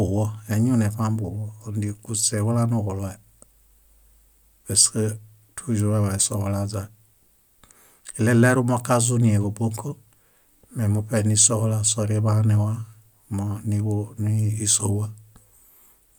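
No technical faults are audible anywhere in the recording.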